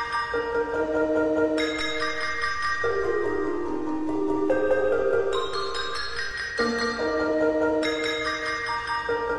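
A DC step shifts the waveform's zero line at 1.8 s and holds until 6.31 s. The offset is about -33 dBFS. Each jump gives a low thump, once going in and once coming out. The sound itself runs on unchanged.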